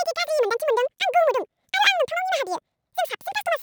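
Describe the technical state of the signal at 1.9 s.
At 1.9 s you're hearing the audio read two samples at a time (double speed), and it's like that through the whole clip. Sample pairs get taken as single frames, so the speech runs at 2x, a full 12 semitones up.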